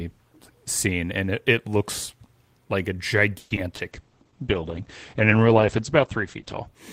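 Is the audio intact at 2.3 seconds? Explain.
Yes, at 2.3 seconds the speech plays through intact, with no audible dropout, click, distortion or other fault at that moment.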